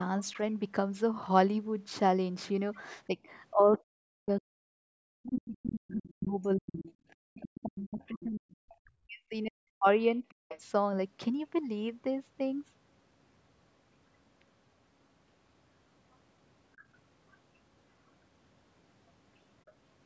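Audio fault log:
3.07–10.52 s, speech suppressed in double talk: the talker's speech dips by as much as about 40 dB and breaks up for roughly five seconds in all, likely from the echo canceller turning both sides down while they overlapped.
5.56–6.10, 6.82–8.53, 10.51–10.60, 16.78–17.37 and 19.66–19.72 s, other side's voice leaking through: a faint second voice sits about 15 to 35 dB under the speech, likely loudspeaker echo the canceller missed.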